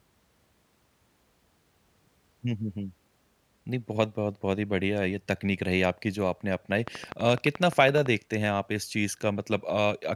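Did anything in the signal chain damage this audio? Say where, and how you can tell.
Yes: a train of clicks from 6.88 to 8.07 s, regular at 11.8 per second and about 10 dB above the speech, likely interference in the analogue wiring.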